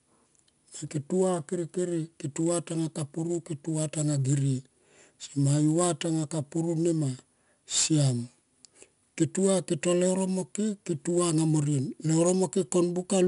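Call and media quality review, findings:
Gritty, level-following hiss on all louder speech, roughened onsets, plainly audible throughout; nothing above 10.6 kHz. 4-bit ADPCM compression: samples coded as coarse 4-bit steps from a prediction, adaptive step lagging transients. Consistent with an 89 kbps stream.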